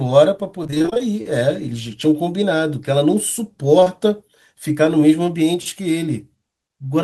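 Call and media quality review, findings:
Repeated packet loss (robotic sound), 0.63–1.02 s: choppy stretch, roughly half patched by jitter-buffer concealment, holes up to 22 ms. The sustained run separates it from isolated loss.

Short concealed packet loss, 3.80–3.88 s: two back-to-back 20 ms holes extrapolated by the decoder, heard as one brief smear rather than robotic chop.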